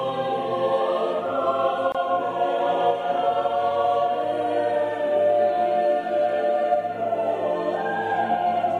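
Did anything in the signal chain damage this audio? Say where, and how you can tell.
Yes: a gap at a join of encoded pieces at 1.92–1.95 s opens a 25 ms silence in the music, shown as a blank vertical strip, from untrimmed encoder delay and padding.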